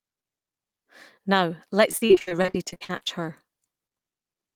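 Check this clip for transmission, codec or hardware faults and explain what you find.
One transmission fault is present. From 1.91 to 3.12 s there is repeated packet loss, heard as robotic sound. Around twenty short holes occur, the longest about 45 ms. Each is patched by stretching the preceding sound. That covers over 40 percent of the stretch. The speech turns choppy, with pieces missing.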